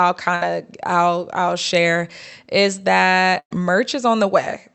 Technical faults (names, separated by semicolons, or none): burst of packet loss